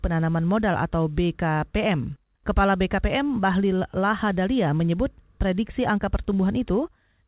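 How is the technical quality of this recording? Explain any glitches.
No glitches can be heard.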